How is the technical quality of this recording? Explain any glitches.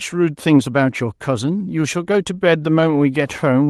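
No glitches can be heard anywhere in this speech recording. It has passed through a WebRTC call path, and its high end stops at 12 kHz, which points to Opus coding at around 32 kbps.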